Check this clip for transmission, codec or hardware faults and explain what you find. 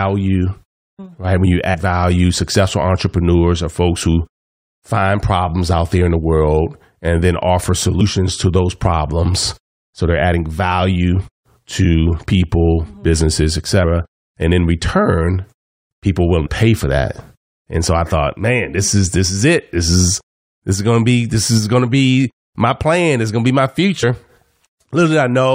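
Two kinds of fault turn up: compressed frames skipped, three times, and a block of digital silence, twice.

Compressed frames skipped at 1.73–1.75 s, 16.45–16.47 s and 24.02 s. Whole coded frames were never played, either lost from the stream or rejected by the decoder as corrupt. Each jump is a multiple of a frame length of 23.2 ms. Roughly 100 ms, about five frames, vanishes at 1.73 s. About 70 ms, around three frames, is lost at each of the other two: between "in return people willing" and "pay for that", and just after "going to be my". At each join the speech lurches forward by the length of the missing frames.

A block of digital silence appears at 2.04 s, just before "successful entrepreneurs are folks", and again at 12.44 s. The output buffer was filled with zeros instead of audio, most plausibly because processing missed its deadline. The gaps last 0.67 ms and 2.67 ms, which fits blocks of 32 and 128 samples. 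With no fade, the sound cuts straight out and back, so each gap is heard as a tick rather than an audible hole.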